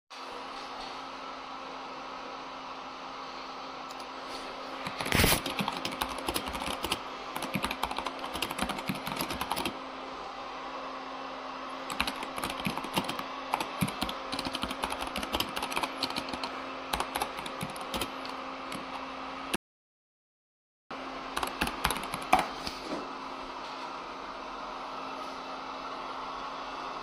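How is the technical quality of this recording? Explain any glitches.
The recording has one clear glitch, an audio dropout to silence lasting about 1.35 seconds. From 19.56 s to 20.91 s the sound cuts off abruptly and is replaced by dead digital silence, with no background or room tone underneath, before returning just as suddenly mid-flow. Whatever occurred in that span is simply missing. The likely cause is the input being lost briefly, through a disconnected device, a broken link or an accidental mute, while the recorder kept writing silence.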